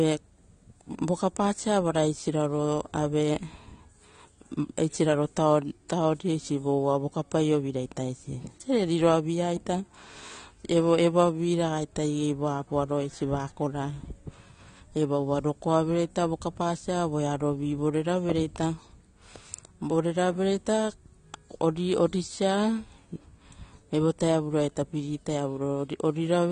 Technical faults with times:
0.00-26.51 AAC compression

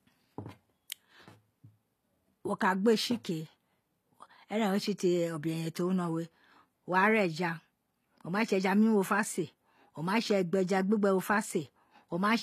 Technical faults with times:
0.00-12.42 HE-AAC compression

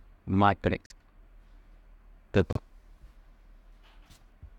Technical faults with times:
0.86-0.92 Bluetooth stall
2.53-2.58 Bluetooth stall

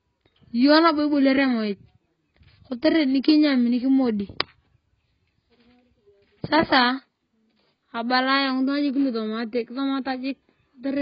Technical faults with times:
0.00-11.01 AAC compression

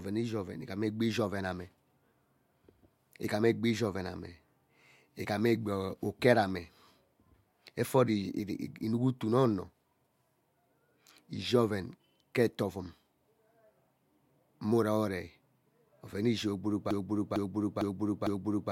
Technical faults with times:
16.91-18.71 broken-record loop

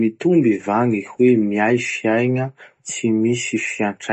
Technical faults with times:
0.00-4.12 MP3 compression

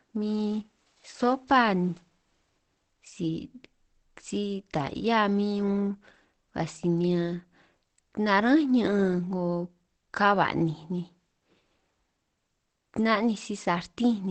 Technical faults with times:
0.00-14.30 Opus compression

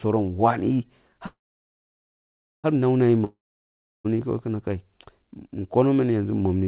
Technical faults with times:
1.26-2.66 call audio freeze
3.24-4.06 long network dropout

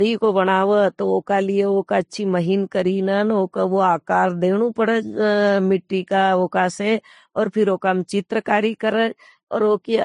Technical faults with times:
0.00-10.04 transcoding between lossy codecs

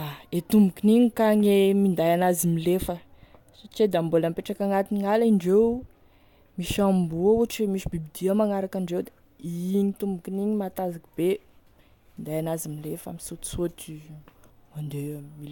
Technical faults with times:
none

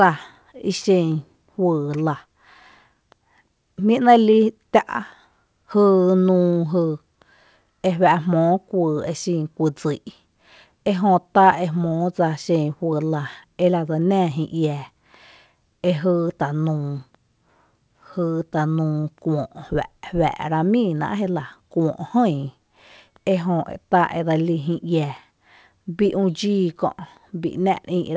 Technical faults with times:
19.00-19.05 short stall from a late packet

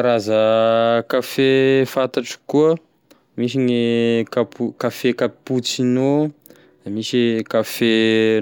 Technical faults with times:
none

